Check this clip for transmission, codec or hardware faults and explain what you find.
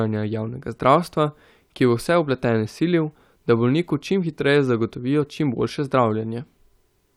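Nothing stood out on listening to this speech clip.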